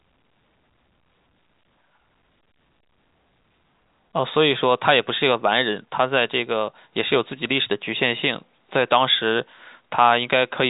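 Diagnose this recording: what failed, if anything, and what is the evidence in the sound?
Nothing stood out on listening to this speech recording beyond the narrow telephone band it was carried in, with no content above about 3.8 kHz.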